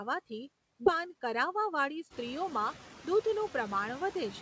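Throughout the clip the background noise drops away between phrases and swells back under the speech. These are noise suppressor artifacts: frame by frame, bands judged to be steady noise are pulled down by about 13 dB, so the cut pumps with the speech. The effect is clearest once the room noise rises by about 11 dB around 2 s.

At 0.86 to 0.88 s the speech lurches forward with no gap, as if a fraction of a second has gone missing. This is a skip ahead: roughly 0.4 s of audio was discarded while later audio was already queued, and the two sides were spliced almost directly.

From 0.95 to 2.61 s the speech sounds slightly rushed at unchanged pitch, running at about 105% speed. This jitter buffer speed-up comes from the receiver trimming many short pitch-period slices, about a tenth of a second in total, to shed excess buffered delay. Across the clip, nothing above 8 kHz comes through, which fits a wideband call codec such as G.722.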